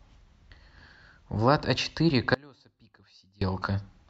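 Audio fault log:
2.34–3.41 s, audio dropout to a faint residue: the speech cuts out abruptly for about 1.07 s, leaving only a faint trace about 30 dB under normal level, then snaps back; likely the source dropped while the downstream path stayed live, so a little leaked through.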